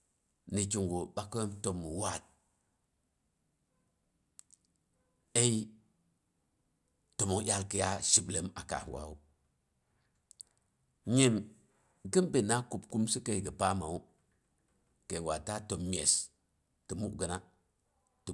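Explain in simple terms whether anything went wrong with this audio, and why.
Listening to the speech closely, nothing stood out as having gone wrong with the audio.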